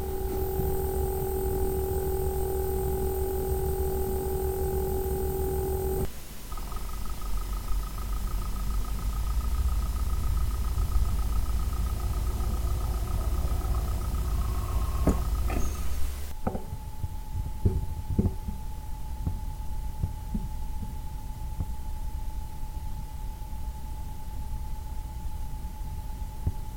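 From 8.65 to 13.25 s there is crude rate conversion. The sample rate was changed without a proper filter, apparently by picking the nearest existing sample each time. The pattern fits a step from 48 kHz down to 44.1 kHz. Each dropped or repeated sample adds a small error that recurs at a fixed rhythm. That error forms shifted, inharmonic copies of the sound itself, roughly 30 dB below it. The result is a gritty, inharmonic fizz that rides on loud and high-pitched parts.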